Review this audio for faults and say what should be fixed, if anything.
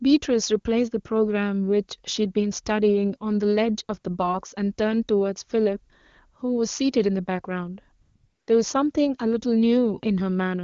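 From 8.01 to 8.47 s the real background drops out and a smooth, steady hiss takes its place for about 460 ms. This is AMR comfort noise: the phone judged the talker silent, stopped sending speech frames, and the receiver synthesised noise from a rough description of the background's level and spectrum. Making voice activity detection less aggressive, or disabling discontinuous transmission, would keep the real background in the pauses.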